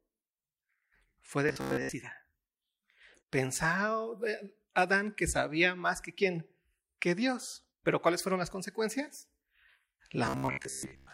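At 1.49 to 1.92 s and again from 10.26 s to the end, the speech goes robotic: a rigid metallic buzz near 66.7 Hz. That's likely repeated short buffers, with roughly 15 ms chunks looped while most of the real audio is skipped.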